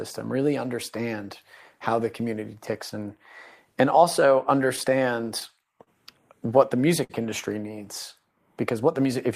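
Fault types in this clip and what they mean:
Scattered short gaps: Starting just after "and also", between about 4.61 and 5.89 s, roughly seven packets went missing or arrived late. Each hole, the longest around 30 ms, was covered by extending the preceding sound, about 100 ms of patching in all, near 7% of that stretch. The result is small ticks and smears. A spectrogram shows brief frozen or blurred harmonic slivers, and the waveform shows repeated copies of the same cycle.
Short stall from a late packet: At 7.04 to 7.11 s, just before "industry needs", one packet was due but absent, so the jitter buffer ran dry. The receiver held the last sound for 55 ms until the packet arrived, then resumed without losing anything, pushing everything after it 55 ms later. It sounds like a brief drawn-out hold with a slight buzz or dip. A spectrogram shows flat, unchanging horizontal bands, and the waveform shows one looped periodic segment.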